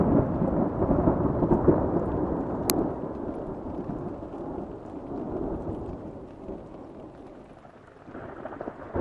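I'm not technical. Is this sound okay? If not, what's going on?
No. At 2.70 s there is an uninitialised buffer: for about 1 ms the player outputs leftover memory instead of audio, which fits a 32-sample buffer. Unlike a simple click or a silent dropout, you hear a sharp, loud crack.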